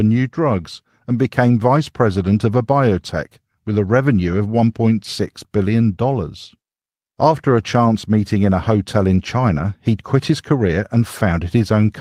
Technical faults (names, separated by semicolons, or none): lost packet rebuilt from error correction